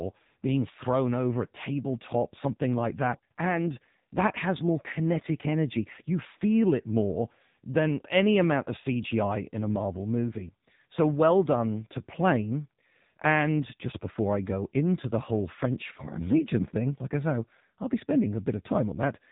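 It's a speech clip run through an AMR narrowband mobile codec for its whole length. Nothing gets through above 3.8 kHz, and the heavy coding leaves the voice buzzy and synthetic. That degree of damage fits AMR-NB's low 6.7 kbps mode.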